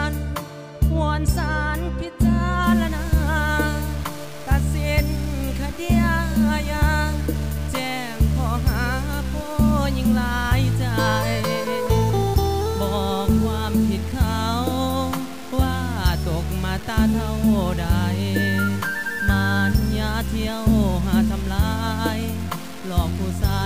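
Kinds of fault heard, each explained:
Low bit depth without dither: From 2.64 s to the end, the audio was likely cut down to very few amplitude steps, with the values simply truncated and no dither added. The resulting grit fits roughly 5-bit resolution. Because the rounding error tracks the waveform, it is heard as a rough, grainy distortion that changes with the sound itself. It sits only about 20 dB below the signal, and the quietest moments break up into sputter or fall to silence.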